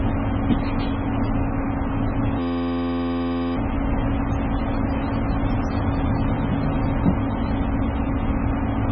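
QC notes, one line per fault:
Throughout: MP3 compression, likely. Nothing above 6.5 kHz, with heavy watery swirling as weak bands drop in and out, which fits a very low bitrate near 16 kbps.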